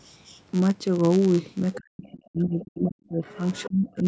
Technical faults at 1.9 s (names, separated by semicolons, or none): block size mismatch (padded); speech suppressed in double talk